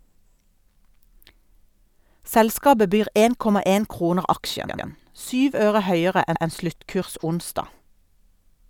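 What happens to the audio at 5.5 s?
Nothing goes wrong at 5.5 s; the speech continues intact through that moment.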